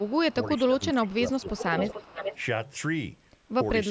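From the start to 0.34 s a faint delayed copy of the speech sits well beneath the main talker, trailing by about 389 ms. This is an echo leak, likely from the far end playing the call on a loudspeaker while its echo canceller let part of the microphone pickup return down the line. The same echo resurfaces in short scraps at 1.08 to 1.15 s and 1.40 to 1.51 s, growing from barely audible to roughly 20 dB under the speech. Between 1.78 and 2.41 s it becomes clearly audible at about 10 dB below, with the delay stretched to about 436 ms.

Overlapping these, the main speech ducks by up to about 15 dB in a brief dip at 0.33 to 0.39 s and again in pieces between 0.63 and 1.77 s, adding up to roughly 0.77 s of attenuated audio. That is speech suppressed in double talk, likely an echo canceller mistaking the talker for echo while both sides overlapped and pulling everything down together. The band tops out at 8 kHz throughout, consistent with ordinary call microphone processing.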